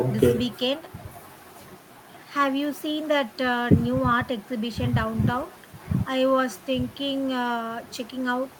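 Nothing in the speech recording registers as a technical fault at any point.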